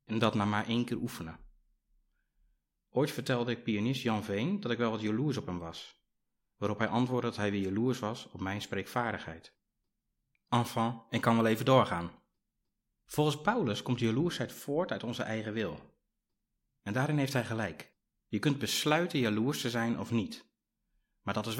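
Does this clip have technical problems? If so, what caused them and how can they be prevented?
No, this recording has no audible technical problems.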